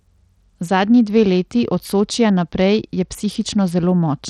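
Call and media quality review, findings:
Bluetooth SBC compression, throughout: gritty grain and flickering, unstable treble on the speech; nothing above 18.5 kHz. Spectrogram shows patchy, blinking high bands and a hard ceiling. Likely SBC at a low bit pool, consistent with roughly 80 kbps, starving upper sub-bands.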